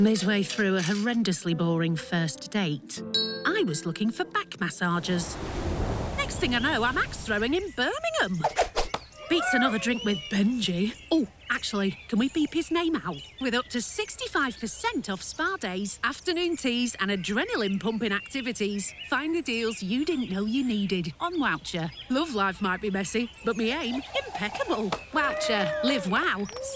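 No technical faults can be heard anywhere in this audio. There is nothing in it that calls for a time, a value or a cause to be given.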